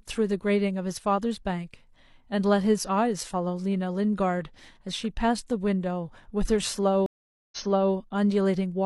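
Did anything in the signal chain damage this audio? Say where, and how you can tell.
Yes, at the network stage. A stream reconnect breaks the speech between 7.06 and 7.94 s. The audio goes silent for 0.46 s, then resumes 0.42 s earlier, so a stretch repeats. The link dropped, the player reconnected, and the server resent a burst into a fresh decoder.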